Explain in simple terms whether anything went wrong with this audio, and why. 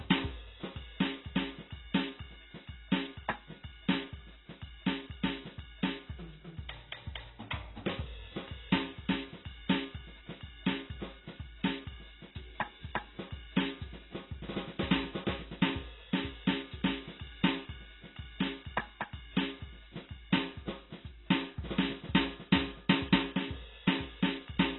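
Something did go wrong. From the first second to the last, this music sounds muffled, with nothing above about 4 kHz, so the brightness is simply gone. Sustained notes have a warbly, swirling texture, typical of heavy AAC compression. The likely cause is an AAC encoder squeezed to a very low data rate: it discards the top of the spectrum and coarsely rounds what remains, leaving gaps and smearing.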